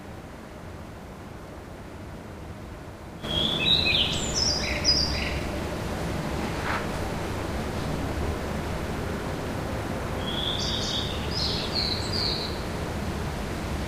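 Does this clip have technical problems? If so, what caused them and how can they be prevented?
Yes. At 4.43 to 4.46 s there is a corrupt frame decoded: a brief error burst peaking around -15 dBFS. It comes from a single compressed frame whose bits were flipped; the decoder played it anyway, so misread gains and codes put energy at the wrong frequencies for that frame's length. Unlike a dropout or a concealed lost packet, the sound is not smeared but replaced by foreign content. To prevent it, carry frames over a checksummed channel and discard frames that fail verification.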